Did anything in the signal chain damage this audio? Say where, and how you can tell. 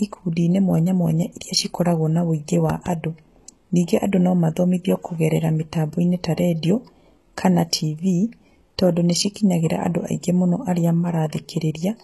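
Yes. HE-AAC compression runs through the whole speech clip and is plainly audible. Nothing remains above 12.3 kHz, and the treble below that edge has a gritty, metallic quality, with s sounds turning lispy. The stage is most likely a low-rate codec, and the damage fits a bitrate around 16 kbps. Only the lower spectrum is coded. The top band is rebuilt by copying lower bands upward under a coarse envelope, so its harmonics don't line up with the real ones.

A loud pop sits between 2.70 and 2.89 s. It is two sharp pops in quick succession, roughly 10 dB above the speech, and the speech carries on underneath. That pattern points to a sudden voltage step or pulse, likely from a connector, switch, static discharge or driver glitch in the analogue wiring or the converter and driver stage. The downstream circuits shape that pulse.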